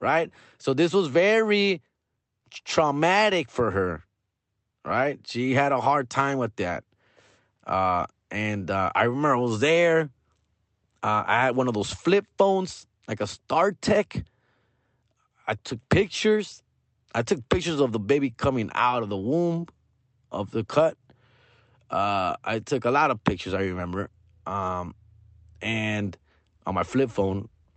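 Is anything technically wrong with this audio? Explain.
No, nothing is technically wrong with this audio.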